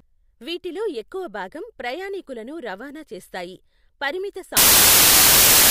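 Speech, with one fault: samples built from the wrong bytes. Right after "ప్రయాణీకులను రవాణా చేస్తాయి పరిమిత", at 4.57 s, the sound turns into loud, harsh broadband noise that runs to the end. The reader is assembling each sample's bytes wrongly. The fast-changing low bits become the dominant part of each value.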